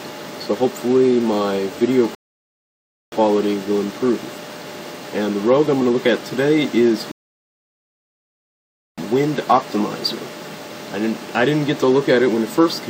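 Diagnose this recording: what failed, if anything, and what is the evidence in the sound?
The failure is a rebuffering stall at the playback stage, where the player drained its buffer of downloaded audio and had to wait for more data. The sound drops to silence from 2.15 to 3.12 s, adding about 0.97 s, and again from 7.12 to 8.98 s, adding about 1.86 s. Each time it resumes exactly where it stopped, so nothing is lost; the gaps only stretch the timeline.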